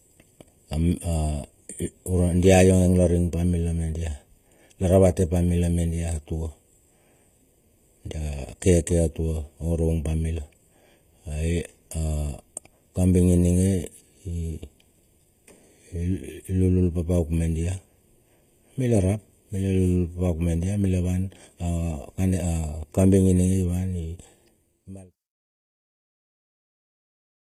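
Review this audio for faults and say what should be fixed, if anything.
Throughout the speech there is channel delay (comb filtering): one channel trails the other by roughly 0.4 ms, and summing them to mono cancels energy at evenly spaced frequencies, the first notch near 1.5 kHz. The result is a hollow, phasey tone. Unlike room reverberation, the notches stay fixed and nothing lingers after each sound stops. Align the channels to the sample before any mono fold-down, or send only one channel.

The treble is bright yet gritty and lispy on s sounds, with upper harmonics that do not line up with the fundamentals below them. This is the signature of HE-AAC compression, likely at a low bitrate around 20 kbps, where spectral band replication copies lower bands upward to fill the top end. Plain low-bitrate codecs sound dull or swirly, not bright and metallic. Encode at a higher bitrate with a full-band codec, without band replication. 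The fade-out from about 24 s to 25.18 s is smooth and intended.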